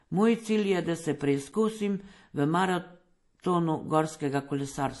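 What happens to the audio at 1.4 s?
At 1.4 s, as across the whole clip, the speech is dull with nothing above 11.5 kHz, and artefacts from different codecs are heard together. That mix likely comes from transcoding between lossy codecs, an MP3 pass re-encoded to AAC-LC at rates near 48 kbit/s. The later codec spends bits on the earlier artefacts and adds its own.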